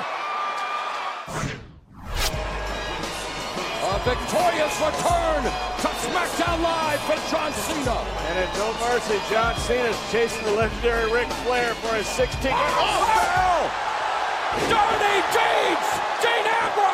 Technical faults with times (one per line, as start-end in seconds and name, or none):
7.24-7.83 CD scratch ticks